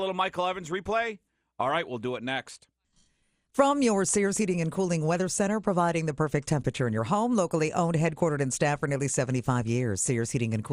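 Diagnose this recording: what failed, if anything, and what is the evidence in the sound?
The failure sits at the codec stage and runs through the whole speech clip: the top end is dull and unstable, and a gurgling, granular grit rides on the voice. That pattern points to MP2 compression, likely starved of bits, which fits roughly 80 kbps, so upper sub-bands drop out and flicker while the remaining bands are coarsely quantised.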